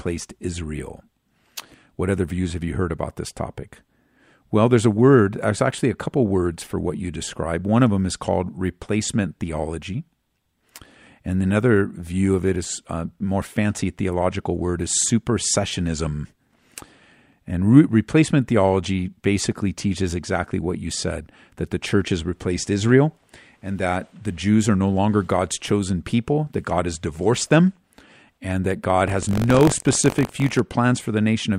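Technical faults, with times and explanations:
29.06 to 30.60 s, buffer tearing: after "and that", a robotic 46.9 Hz rattle, fitting a 1024-sample buffer, splices in a small slice of audio from about 40 ms earlier. Unlike random dropouts, it repeats steadily.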